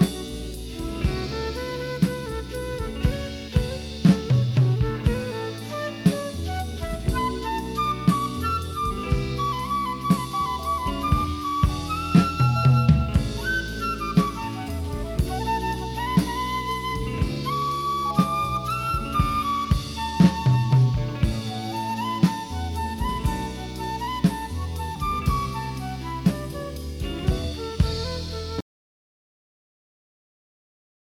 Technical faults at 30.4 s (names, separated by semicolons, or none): audio dropout to silence